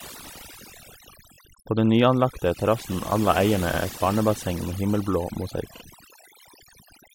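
Speech plays against a near-silent background with twinkling specks, the mark of overdone noise removal that cut frequency bands near the noise estimate. Brief stutters at 1.34 s, 3.73 s and 5.76 s replay blocks of about 21 ms, 85 ms and 43 ms once each. These are repeated frames, sent or written twice, which adds that time to the audio.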